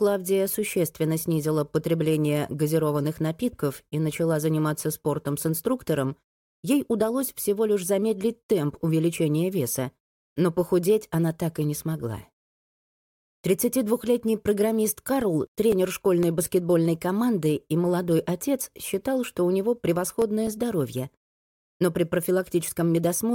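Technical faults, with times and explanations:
14.20–16.74 s: CD scratch ticks. Eleven little ticks at about four per second, each only a few milliseconds. A scratch beat the error correction once per disc turn, and the player patched over the lost samples.
19.71–22.25 s: CD scratch ticks again. Same pattern: eleven ticks at about four a second, slightly longer but still just a few milliseconds. It's the same once-per-revolution data loss the player had to interpolate or mute.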